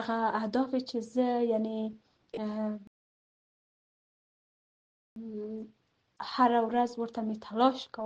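At 2.87 s the sound cuts abruptly to silence and stays silent until 5.16 s, a rebuffering stall that adds about 2.29 s to the clip. Playback ran out of downloaded audio and halted until more arrived. What separates this from a dropout is the resumption: the sound picks up exactly where it broke off, with nothing skipped, so the gap is pure inserted silence rather than missing material.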